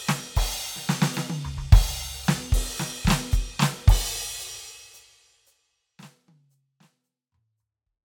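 There are no technical faults to describe in this music, which simply fades out gradually over its last few seconds.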